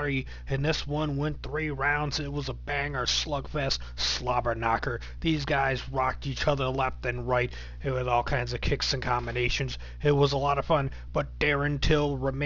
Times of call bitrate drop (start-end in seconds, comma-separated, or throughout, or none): none